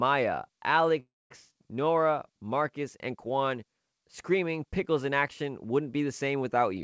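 At 1.00 s the speech gives way to a brief fading buzz, then 0.22 s of silence, and picks up at 1.32 s with nothing lost, only late. This call audio freeze was likely caused by delayed packets emptying the jitter buffer, adding 0.3 s of delay.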